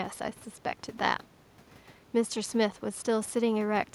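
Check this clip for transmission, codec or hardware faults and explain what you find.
No transmission, codec or hardware faults.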